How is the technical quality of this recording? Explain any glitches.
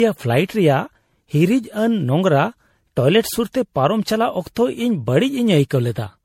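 The quality is poor: the speech is degraded by generation loss throughout. It sounds swirly, hollow and smeared, with blurred consonant attacks, likely from MP3 re-encoding around ten times at something like 64 kbit/s. A spectrogram shows nothing above 16.5 kHz and patchy, flickering holes.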